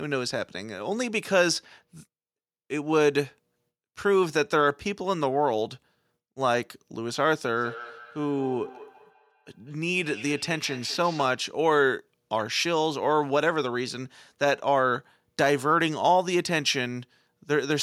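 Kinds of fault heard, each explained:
Feedback echo between two devices: from about 7.57 to 11.49 s the speech comes back at a steady interval of roughly a fifth of a second, peaking about 18 dB below the direct voice. That fits two devices sharing a room on the same call, with one replaying the other's microphone feed. The mic hears it again, and since each echo canceller only removes its own device's playback, the loop goes unchecked.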